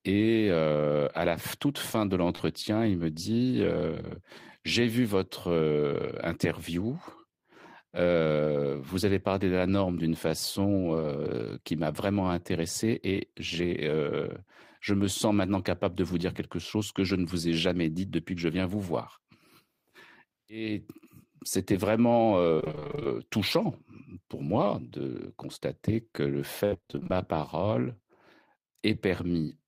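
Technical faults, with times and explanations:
2.35–2.41 s, short concealed packet loss: about 40 ms between "la toute fin de" and "il me dit euh" never arrived. The decoder extended the preceding sound across the hole, leaving a brief smear.
22.55–23.07 s and 26.65–27.11 s, repeated packet loss (robotic sound): 13 and then 11 gaps, the longest 26 ms and 68 ms. About half of each span is patched, so the audio sounds choppy with pieces missing before "touchant pour moi de" and after "de constater que le".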